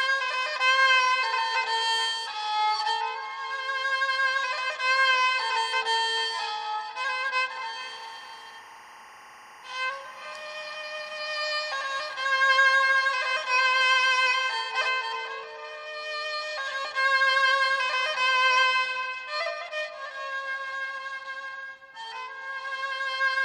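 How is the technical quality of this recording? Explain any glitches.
There's one real problem: timecode bleed from 7.80 s to 14.59 s. For that stretch a steady chirping warble sits behind the sound, roughly 20 dB down. Linear timecode, a square wave flipping between two tones around 1 and 2 kHz, has leaked in from a neighbouring track or cable. The pattern repeats in step with 24 frames per second, which gives the chirp its busy, even rhythm.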